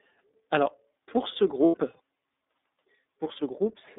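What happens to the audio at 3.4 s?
At 3.4 s the speech sounds rough, synthetic and muffled above 3.7 kHz, as it does throughout: iLBC codec damage, coding each 30 ms frame independently at a low bitrate.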